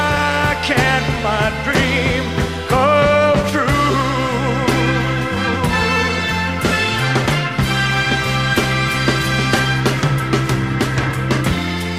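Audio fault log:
No faults detected in this clip.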